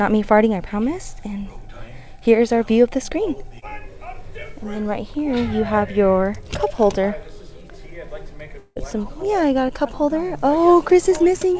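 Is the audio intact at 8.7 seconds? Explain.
No: from 8.58 to 8.78 s, a likely long network dropout leaves a buzz that fades into brief silence, longer than a momentary packet-loss click.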